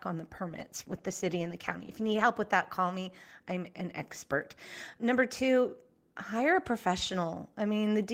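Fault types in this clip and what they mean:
Call bitrate drop: From 0.49 to 2.33 s the speech turns rough and muffled. The call's encoder was starved of bits and coded more coarsely, dulling the highs. The sound fits a fall from about 32 to 15 kbps before recovering.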